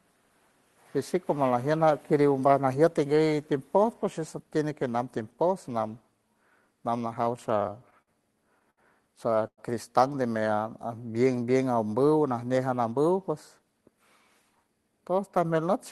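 From 7.25 to 8.09 s, repeated stalls (stutter) break the speech eight times as the jitter buffer kept emptying. About 118 ms of held, fading sound fills the gaps, the longest 54 ms, appearing as smeared, repeating patches in the spectrogram.

At 8.70 s, a short stall from a late packet stretches one sound for 70 ms until the packet arrives. It shows as a flat, drawn-out stretch with a slight dip in the waveform.

From 9.47 to 9.60 s, a call audio freeze, likely from packets held up in transit, puts in 104 ms of fading buzz, of which 60 ms is silent. It looks like a blank band on the spectrogram.

Between 10.56 and 11.25 s, a jitter buffer slow-down repeats pitch periods, adding 69 ms so the audio runs at 91% speed with unchanged pitch. Harmonics stretch out horizontally.

Two jitter buffer speed-ups follow, at 13.16 to 13.98 s (109%, about 70 ms removed) and 14.42 to 15.18 s (112%, about 100 ms removed). 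Each sounds hurried at the same pitch, with visibly compressed syllables. Throughout, the Opus call path limits content to 12 kHz, which fits a bitrate near 20 kbps.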